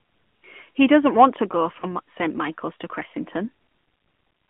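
The speech has passed through the AMR narrowband mobile codec. Its 8 kHz sampling leaves nothing above 4 kHz, and the audible band runs from about 150 Hz to 3.4 kHz, so the speech sounds thin and boxy. The codec rebuilds each 20 ms frame from a vocal-tract model driven by a few pulses. The damage is plainly audible as a buzzy, synthetic edge, which fits a mid-rate mode around 10.2 kbps.

At 1.80 to 1.86 s, just after "doesn't want to go", there are lost AMR speech frames. A frame failed its checksum after a radio error, and the decoder filled the gap by repeating the previous pitch and vocal-tract settings at lower gain. The sound points to a single lost frame, about 20 ms of missing audio. It is heard as a brief dip or warble, and the speech sounds weak or rough for a moment before it recovers.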